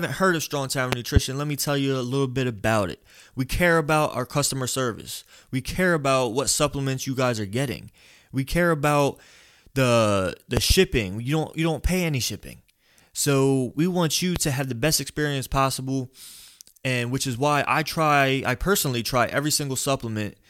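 A loud pop, a double one, lands at 0.92 to 1.19 s before "let me tell you". Another double pop comes at 10.57 to 10.73 s after "care about the the", and a single pop at 14.36 to 14.39 s sits between "we want you" and "to have the best". Each stands some 15 to 20 dB above the speech, likely from an electrical pulse such as a switch or static. On a waveform these appear as tall spikes, and a spectrogram shows them as thin vertical broadband streaks.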